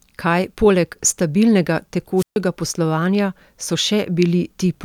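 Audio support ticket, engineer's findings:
Wireless microphone squelch dropout, 2.17–2.37 s, after "poleg stabilnega", before "poslovanja so". Brief hiss rise, then about 136 ms near-silent gap, speech resumes. RF link fades; receiver squelch mutes output until carrier recovers. Check transmitter battery, antenna placement, range.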